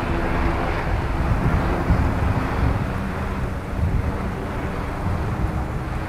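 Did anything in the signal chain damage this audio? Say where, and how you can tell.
Yes: from 1.21 to 5.64 s a gritty, inharmonic fizz trails louder, brighter sounds, about 35 dB down. That's crude rate conversion at the sample-format conversion stage, 48 kHz to 44.1 kHz by nearest-sample picking with no filter.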